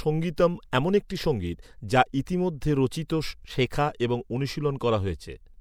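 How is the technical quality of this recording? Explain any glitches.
The recording shows pre-echo at 0.36, 0.71, 2.26 and 3.08 s. The codec's quantisation noise, sized for loud attacks falling late in their blocks, spreads back roughly 13 to 17 ms into the quiet just before them, so each attack arrives behind a brief hiss and sounds softened.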